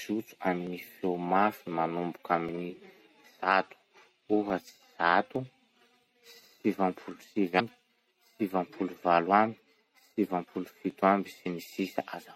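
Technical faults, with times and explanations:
Throughout: MP3 compression. The upper detail sounds watery and swirly, with metallic chirps on s sounds and smeared attacks. This is likely a low-bitrate MP3 encode, which fits a rate near 64 kbps.
0.67, 2.49, 3.52, 4.50, 5.36, 7.11, 8.75 and 10.90 s: dropped samples. Each is a single sharp click. Under a millisecond of audio is likely missing each time, so the waveform jumps abruptly to a later value. The gap is too short to remove any audible sound.
7.56 to 7.61 s: damaged data in a compressed stream. A brief glitch breaks in here. Corrupt compressed frames make the decoder misread the data and lose sync. It then skips forward to find the next valid frame.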